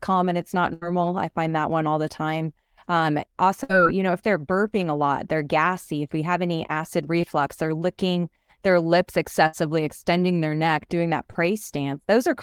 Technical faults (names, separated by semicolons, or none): burst of packet loss; short concealed packet loss